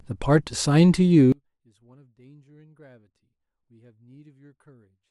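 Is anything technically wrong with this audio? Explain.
Yes. From 1.32 s to the end, the speech suddenly collapses to a faint residue, about 33 dB quieter than before. This is likely one channel inverted: with reversed polarity on one side, the shared centred speech cancels when the channels sum to mono.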